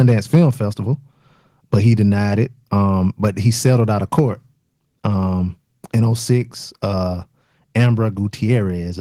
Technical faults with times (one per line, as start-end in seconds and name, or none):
0.00-0.35 microphone overload
0.35 microphone volume stepped down